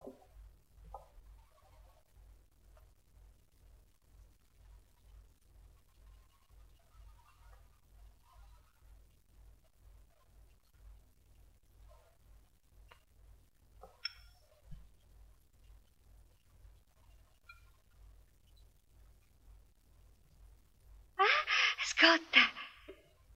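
From 2.84 s to 6.13 s there is crude rate conversion: a gritty, inharmonic fizz rides on the louder and brighter parts of the sound. The pattern fits a 48 kHz to 44.1 kHz change done by simply picking the nearest sample, with no filtering, so a periodic timing error adds unrelated tones roughly 25 dB below the signal. On a spectrogram, faint spurious lines and haze appear between and above the true partials for just that span.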